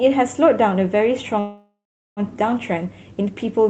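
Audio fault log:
1.39–2.20 s, call audio freeze: The speech stops and its last sound stretches into a fading buzz, then 0.39 s of silence. The likely cause is held-up packets draining the jitter buffer. Speech resumes where it stopped, nothing lost, 0.77 s late.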